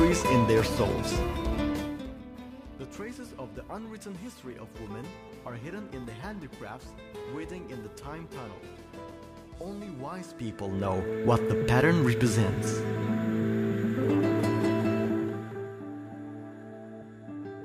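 At 0.6 s and again at 5.29 s the sound jumps forward with no gap, losing around 20 ms each time. That pattern points to a dropped buffer (overrun), which is the likely cause: the capture side didn't pick up a block of samples before the hardware wrote over it, so that slice vanished and the audio on either side got spliced together directly. You hear it as a small skip rather than a silence.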